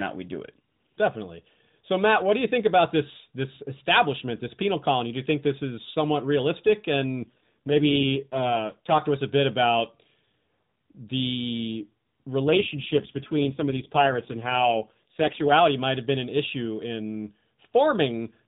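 From 7.22 to 9.03 s and again from 12.47 to 15.52 s the speech turns rougher and more synthetic, with no gap and no band change: an AMR rate drop, likely from 12.2 to 4.75 kbps.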